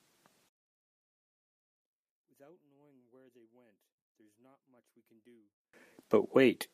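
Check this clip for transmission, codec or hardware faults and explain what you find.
One fault is present. From 0.49 s to 5.73 s, the speech almost disappears when heard in mono, falling by about 38 dB to a faint residue. The likely cause is one channel inverted: a stereo channel with reversed polarity, so everything shared by both sides cancels when they are summed.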